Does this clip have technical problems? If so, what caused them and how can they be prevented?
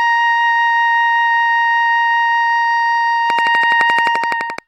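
Yes. A train of clicks runs from 3.30 to 4.60 s: about fifteen near-identical pops at a steady 11.7 per second, standing well above the music. The likely cause is electrical interference from nearby equipment or a faulty connection or power supply injecting repeated pulses. Keep noisy gear and cables away from the signal path, and give the equipment a stable connection and power.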